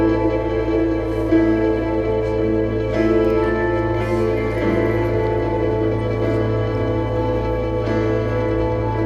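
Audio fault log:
No faults heard anywhere in this recording.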